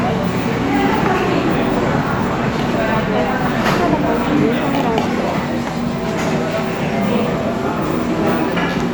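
No technical faults can be heard anywhere in these sounds.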